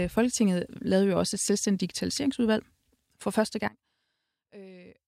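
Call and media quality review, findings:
From 3.68 s to end, after "selvstændigt digitaliseringsudvalg for første", speech collapses by about 23 dB into a faint residue. Likely one channel inverted: reversed polarity on one stereo leg cancels the centred voice in the mono sum, leaving only inter-channel difference.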